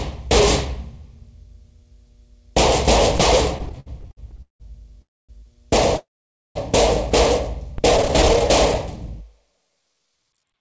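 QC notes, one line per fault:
3.58–4.62 s and 7.97–8.42 s, repeated stalls (stutter): the sound keeps catching and restarting as packets arrive late or slower than playback, emptying the jitter buffer each time. The receiver extends the last sound to bridge each wait, so nothing is lost, but the sound drags. The first run has 14 gaps totalling 419 ms, the longest 178 ms, covering 40% of the span. The second has 12 shorter gaps, none over 14 ms, totalling 125 ms and covering 28%.
5.02–5.31 s and 5.97–6.57 s, call audio freeze: the sound halts and its last fragment is held over, then fades to silence for about 240 ms and then about 510 ms before resuming exactly where it stopped. The likely cause is packets held up in transit, draining the jitter buffer. This inserts gaps of 268 ms and 583 ms with nothing missing. The high band through this path stops at 8 kHz, which fits a wideband call codec such as G.722 at 64 kbps.
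7.78 s, DC step: the waveform's zero line jumps suddenly, heard as a low thump while the sound itself carries on unchanged. The offset then dies away rather than holding, drained off the way a 20 Hz high-pass would bleed it down. This is typical of a converter recalibrating or an offset input being switched in.
8.74–10.60 s, jitter buffer slow-down: with its reserve low or its target delay just raised, the receiver rebuilds the buffer by repeating single pitch periods and bits of pauses many times over. This stretches the final stretch by 197 ms, so the sound runs at 90% speed with its pitch unchanged and comes across as drawn out.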